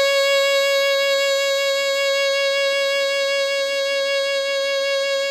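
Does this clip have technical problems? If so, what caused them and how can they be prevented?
No, nothing in this music stood out as a technical problem on listening.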